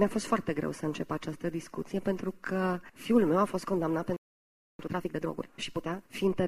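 At 4.16 s the sound just stops dead and sits silent for about 0.63 s, picking up again at 4.79 s. That's a playback stall, most likely the player running dry of data or its thread getting blocked until it could recover.

Right after, from 4.79 s to 6.03 s, there's a time-compressed catch-up: the player trims its backlog by snipping out small pieces and cross-fading the joins, so the audio runs about 1.5 times fast at normal pitch.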